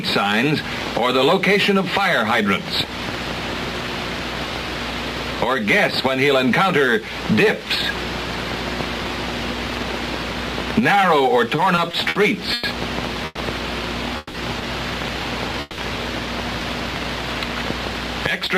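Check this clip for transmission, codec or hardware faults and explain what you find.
Two transmission faults appear in the second half of the clip, a burst of stuttering followed by four short freezes, all between 11.55 s and 15.80 s.

Repeated stalls (stutter), 11.55 s to 12.17 s: the sound catches and drags four times in quick succession, each hitch held over rather than cut, the longest lasting 60 ms. Together the holds fill 120 ms, about a fifth of that stretch, and nothing is lost. Packets were arriving late or more slowly than they were played, so the jitter buffer kept running dry, and each time the receiver stretched the last sound until data came in.

Call audio freeze, at 12.53 s to 12.65 s, 13.25 s to 13.39 s, 14.17 s to 14.36 s and 15.61 s to 15.80 s: the sound stops moving forward and the last moment is held, for 100 ms, 120 ms, 170 ms and 170 ms respectively. The second and third holds end with about 10 ms of silence. 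When the audio resumes, it picks up exactly where it halted, so each pause is an insertion and nothing is missing. The likely cause is packets being held up in transit, which emptied the jitter buffer while the receiver filled the wait by continuing the last sound. Each freeze pushes the audio later by the length of its hold.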